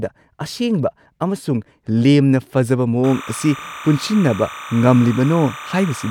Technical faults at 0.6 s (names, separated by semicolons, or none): none